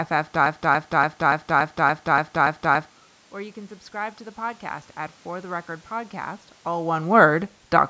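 Right at the start, from 0.46 to 2.91 s, there's a broken-record loop. A chunk of about 286 ms plays nine times back to back, each pass identical, so it sounds stuck in a groove. Whatever should have played across those two and a half seconds is gone. The likely cause is the player, encoder or stream stalling and resending the last fragment it had buffered until fresh data turned up.

Then from 3.32 to 6.45 s you get automatic gain rising. The input level drops by about 12 dB, and the gain control responds by slowly pushing the level up by about 4 dB over roughly three seconds. Because the gain stage lifts everything, the speech and the room noise swell together. That gradual creep is the tell, not a sudden jump. It doesn't fully make up the drop, and a bit later, around 6.5 s, the talker's distance from the mic shifts too.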